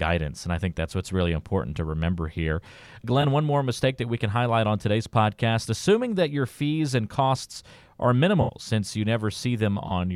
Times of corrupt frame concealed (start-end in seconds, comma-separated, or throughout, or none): 3.21-3.25, 8.41-8.52, 9.88-9.91